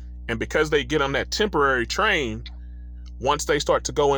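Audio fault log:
Throughout: mains hum. A steady low tone at 60 Hz sits under the speech for the whole clip, with some low harmonics stacked above it. The power line is leaking into the signal path, most plausibly through a ground loop or a transformer near the recording gear, and that coupling carries the supply frequency straight into the audio. The hum is loud, only about 15 dB below the speech, so it stays clearly audible even while the speech is going on.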